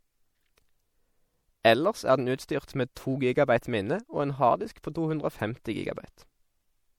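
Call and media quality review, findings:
Likely MP3 compression at a low bitrate, consistent with roughly 64 kbps. Starved bit budget clips treble and drops weak frequency lines frame to frame. Throughout the speech: plainly audible watery, swirling texture, metallic chirps on s sounds, smeared onsets.

Pre-echo at 1.63 s, 2.95 s (just before "to gigabyte minne og") and 4.83 s (just after "minne og en harddisk"). Block transform spreads quantisation noise ahead of sharp attacks. Short hiss of about 11 to 17 ms precedes each onset, and the attacks sound softened.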